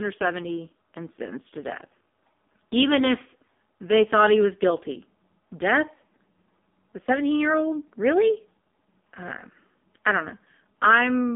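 The speech has been through the AMR narrowband mobile codec for its whole length, at a low-rate mode that points to roughly 5.15 kbps. AMR-NB resynthesises the voice from a vocal tract model and sparse pulses, so with so few bits the codec damage is heavy and the voice comes out buzzy and synthetic. The line band runs about 200 Hz to 3.6 kHz, and nothing above 3.7 kHz survives, leaving the sound dull and telephone-like.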